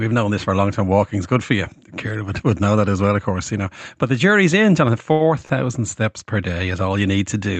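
At 5.12 to 5.23 s, just before "steps per day", a sound is held too long for about 77 ms with a faint buzz or dip. A shorter hold of about 44 ms follows at 5.45 to 5.53 s, again ahead of "steps per day". Both are short stalls from a late packet: the jitter buffer ran dry, so the receiver stretched the last sound until the packet arrived, then resumed from the same point with nothing lost. The Opus call path, band-limited at about 8 kHz, carries both stalls.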